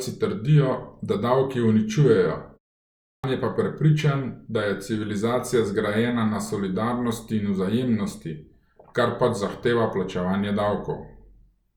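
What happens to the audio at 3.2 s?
At 3.2 s the output device has dozed off during the half-second pause before it and is still waking up, so this is a clipped start after a pause: from 3.03 to 3.24 s about 208 ms of speech is lost. The speech then bursts out of silence with its opening sounds missing.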